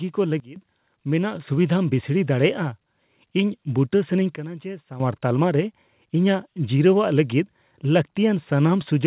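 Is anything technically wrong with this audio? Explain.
Yes. The level of the speech changes abruptly three times.

A sudden gain jump, likely a digital gain setting applied instantly with no ramp, drops the level by about 18 dB from 0.4 to 0.56 s. It drops by about 12 dB again from 4.36 to 5.0 s, between "ᱤᱧ ᱵᱩᱴᱟᱹ ᱥᱟᱱᱟᱧ" and "ᱛᱟᱞᱢᱟ ᱨᱮ". Each time, speech and background fall and recover together at a hard edge.

At 1.35 s, the microphone volume is stepped up. The call software raised the device's input gain in a single step, so voice and room noise both become about 4 dB louder at once, through a call path whose band ends at 4 kHz.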